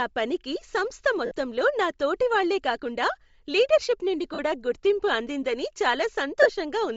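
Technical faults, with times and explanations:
Throughout, Bluetooth LC3 compression: the speech has a breathy, grainy edge with noisy highs, likely from low-bitrate LC3 coding, which fits 7.5 ms frames.
1.26–1.31 s, 4.34–4.39 s and 6.42–6.47 s, lost LE Audio frames: gaps of 52, 45 and 30 ms, after "పనికి సంస్థ" and "లీడర్షిప్ నుండి", become a brief noisy smear as the decoder repeats the last spectrum.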